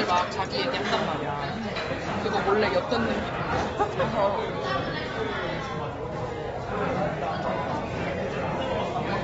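The audio is a recording of everyday sound, with AAC compression damage throughout. Nothing is present above 7.6 kHz, so it sounds dull. The codec artefacts are plainly audible. The likely cause is AAC-LC coding at a low bitrate, around 24 kbps.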